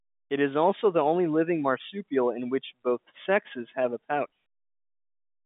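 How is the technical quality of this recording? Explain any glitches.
No glitches are audible: the speech sits in a telephone band of roughly 150 Hz to 3.6 kHz, with nothing above 3.8 kHz, consistent with G.711 A-law telephone coding, and nothing else intrudes.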